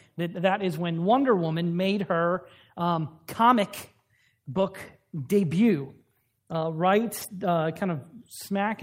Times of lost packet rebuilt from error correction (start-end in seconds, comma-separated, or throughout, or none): 2.29-2.39, 4.51-4.65, 7.21-7.27